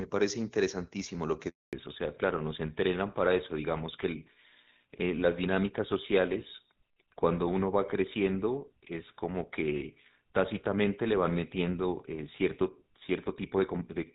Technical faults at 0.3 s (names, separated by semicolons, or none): none